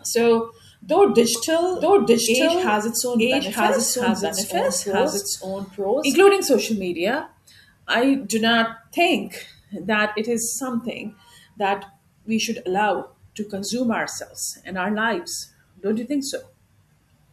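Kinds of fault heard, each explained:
Doubled audio track: the speech has likely been mixed in twice, captured again by a slower path or held out of step by an edit. From 1.35 to 6.15 s, after "so though", a dry, full-band copy trails about a second behind at roughly equal loudness, cutting off abruptly before "social media I do".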